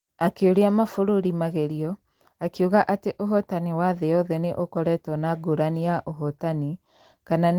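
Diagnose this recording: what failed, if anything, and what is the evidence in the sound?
Nothing failed: no fault can be heard in this speech recording.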